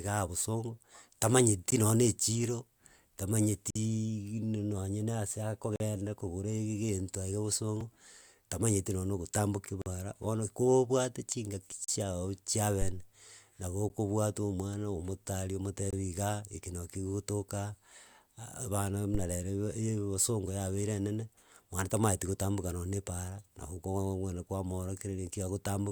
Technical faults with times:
1.71 gap between stream segments
3.70-3.75 gap between stream segments
5.76-5.80 gap between stream segments
7.81 gap between stream segments
9.82-9.86 gap between stream segments
11.84-11.88 gap between stream segments
13.89 gap between stream segments
15.90-15.93 gap between stream segments
19.15-19.34 phantom power thump

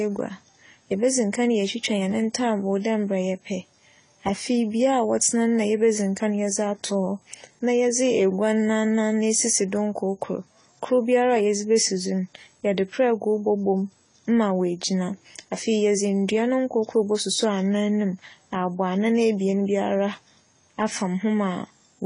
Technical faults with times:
0.00-22.05 AAC compression

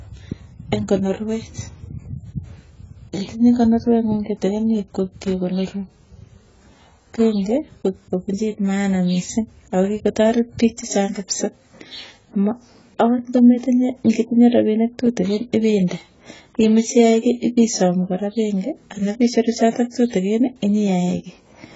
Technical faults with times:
0.00-21.76 AAC compression

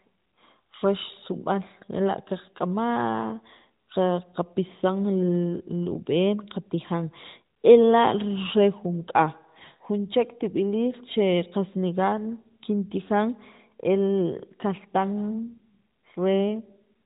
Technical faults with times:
none

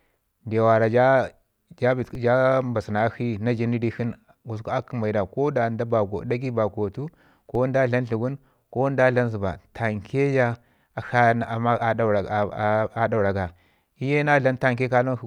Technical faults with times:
2.15 DC step
7.55 DC step

